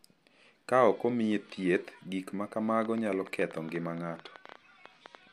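From about 2.82 s to 5.16 s there's a train of clicks running under the speech, around twenty of them at roughly 9.5 per second. The spacing is uneven, so it comes across as a ragged ticking rather than a steady buzz, and the clicks peak at about the same level as the speech, so they're easy to pick out, pauses included. They all share much the same shape, which likely points to interference from nearby gear or a faulty connection or power supply.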